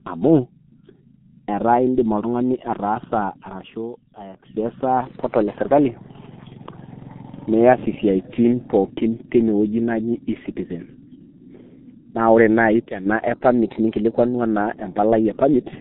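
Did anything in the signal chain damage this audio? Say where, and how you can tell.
Yes, three separate things, all in the speech itself. The whole 16 seconds went through a G.723.1 codec at 6.3 kbit/s, so this is the codec stage. Everything above 3.8 kHz is gone, the low end is thinned below about 150 Hz, and it sounds muffled and hoarse with smeared consonants. That fits a low-rate coder that chops the sound into 30 ms frames and updates its model of the voice too slowly to track fast changes.

There's also a loudspeaker feedback squeal, twice, both at a steady 4.3 kHz tone. The first starts at 2.17 s, right after "ataa indim", swells over about two seconds and runs until 4.49 s, ending up around 10 dB above the speech. The second is from 12.49 to 13.11 s and builds much faster, in under half a second. Because 4.3 kHz sits above the codec's cutoff, this loop formed after decoding, on the playback side, where a mic was hearing its own speaker.

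Finally, from 13.35 to 14.35 s the audio runs about 5.6% fast and sits roughly 94 cents sharp, nearly a semitone, then snaps back. It sounds like a drift correction step in the driver or buffer stage. A clock-matching routine likely shifted the playback rate in one jump to drain its buffer, so speed and pitch moved together.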